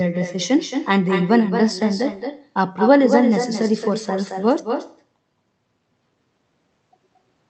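Echo with no canceller runs throughout the speech, from start to finish: the far end's loudspeaker feeds its microphone, and nothing cancels the pickup, so every phrase returns roughly a fifth of a second later, about 7 dB quieter and thinner, through a call codec whose audio stops near 8 kHz.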